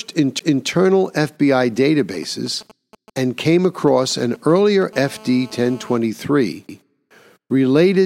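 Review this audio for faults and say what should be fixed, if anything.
CD skip at 0.39 s and 6.68 s: the laser jumps tracks, leaving a tick and a brief mute of a few milliseconds. The sound then resumes elsewhere on the disc, unlike a clean dropout. Damping the player against knocks and cleaning the disc would prevent it.

GSM signalling bursts from 1.99 to 4.83 s: a nearby phone's intermittent radio bursts are rectified into galloping ticks and short 217 Hz buzzes, about 25 dB below the speech. This stop-start pattern is what separates it from the continuous call buzz. Keeping phones away from the recording chain, or using shielded, filtered inputs, would prevent it.

GSM phone buzz from 4.93 to 5.98 s: during a call the same rectified 217 Hz pulses form a steady, raspy, harmonic-rich buzz about 24 dB below the speech. Unlike mains hum, it sits at 217 Hz with no link to 50 or 60 Hz. The same phone distance and RF filtering would remove it.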